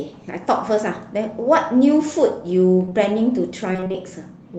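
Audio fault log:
2.85–2.93 s, short concealed packet loss: A brief smear lasting a few hundredths of a second, where the sound seems to hang and waver before picking up again. Two losses of about 20 ms sit back to back, so roughly 40 ms of the call arrived too late. The receiver covered the gap by extending the preceding sound, voiced parts from their pitch and unvoiced parts as shaped noise, then faded back into the real signal.
3.73–3.96 s, repeated packet loss (robotic sound): A choppy stutter across about a quarter of a second, with fragments of the sound missing. Six separate losses, the longest 21 ms, remove about 120 ms in total, so close to half of this stretch is synthetic fill rather than received audio. Each hole is bridged by continuing the last sound, and the next one arrives almost at once, giving the choppy texture.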